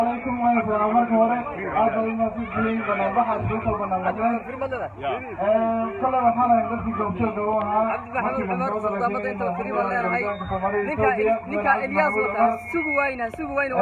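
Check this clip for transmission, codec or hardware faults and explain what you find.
No transmission, codec or hardware faults can be heard in this clip.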